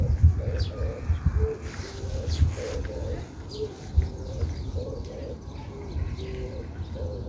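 No technical faults can be heard in these everyday sounds, which come through a call connection whose wideband coding leaves nothing above 8 kHz, consistent with G.722.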